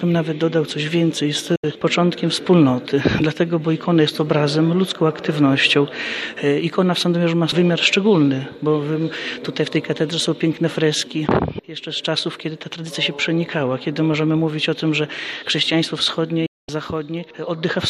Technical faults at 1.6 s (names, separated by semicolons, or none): digital broadcast dropout